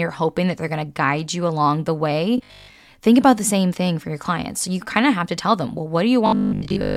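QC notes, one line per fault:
2.38–2.76 s, robotic sound from repeated short buffers: right after "you along the way" the speech turns into a rigid, metallic 50 Hz buzz that only loosely follows the words. Likely cause: audio arriving too seldom, with the player looping a 20 ms slice and skipping most of the real signal.
6.26–6.96 s, robotic sound from repeated short buffers: after "to tell them well" the same 50 Hz metallic drone takes over to the end, with most of the speech replaced by repeats, likely from the same 20 ms buffer looping.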